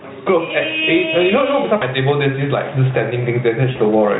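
Throughout the speech the level is squashed, a level swing of about 15 dB that flattens loud against soft. This is gain pumping, likely from gain set far too high with a fast limiter clamping every peak.

From 1.75 to 1.84 s, and again from 3.71 to 3.78 s, the speech smears into a stretched, fading sound before recovering weakly. This is VoIP packet loss concealed by the Speex speech codec. The decoder fills gaps of about 60 ms and 40 ms, which fits three and two lost 20 ms frames, by extrapolating its last pitch and filter with falling gain.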